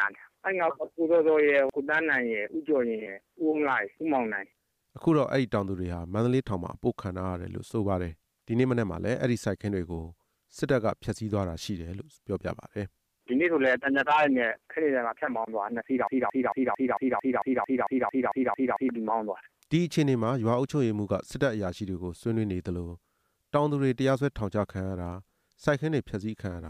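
From 16.07 to 18.89 s a broken-record loop repeats one identical 224 ms fragment thirteen times, likely a stalled player resending its last buffer; unlike stutter, nothing new plays.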